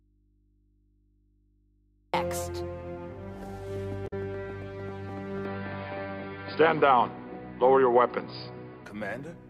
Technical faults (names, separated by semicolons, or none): audio dropout to a faint residue; damaged data in a compressed stream; input switched to a poorer device